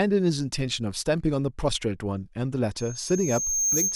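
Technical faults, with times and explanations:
2.77 to 3.96 s, loudspeaker feedback squeal: A single high tone near 6.4 kHz appears in the speech and swells over roughly a second. It ends a little louder than the speech itself. The microphone is picking up the loudspeaker it feeds. At this one frequency the loop gives back more than it receives. Each pass round the loop adds to the tone, so it keeps growing. Nothing breaks the loop before the audio stops.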